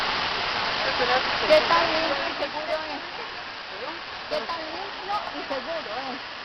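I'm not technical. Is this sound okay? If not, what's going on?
No. From 1.94 to 2.58 s, zipper noise: the volume drops in coarse, unsmoothed steps, about ten per second, each adding a small tick, so it sounds like zipping.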